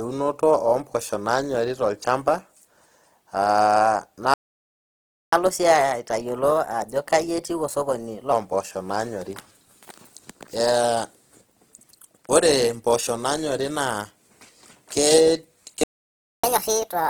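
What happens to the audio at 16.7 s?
At 16.7 s you're inside a catch-up at higher speed, which runs from about 16.44 s to the very end of the clip at 17.09 s. After a stall, the player works through its backlog by resampling it faster, here at 1.5x, so the speech rushes and the pitch jumps roughly seven semitones. It sounds like a sudden chipmunky lurch, and the clip ends before it settles back to normal speed.

Under that, the same Opus compression damage as in the rest of the clip is plainly audible: the speech has a grainy, rough, noisy texture rather than swirly holes. The band is still full, so the problem is the graininess, not muffling. That behaviour fits Opus in its music (CELT) mode starved of bits, likely somewhere around 16 kbps, which keeps band energy but fills detail with folded or noise-like content.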